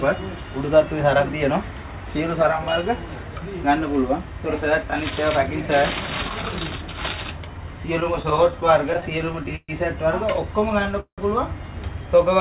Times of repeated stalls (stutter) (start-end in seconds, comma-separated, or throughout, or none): 8.00-9.70, 10.61-11.20